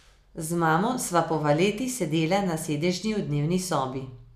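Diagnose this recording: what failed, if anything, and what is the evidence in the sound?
Nothing failed here; the speech runs along without a single glitch, dropout or distortion to point to at any stage of the chain.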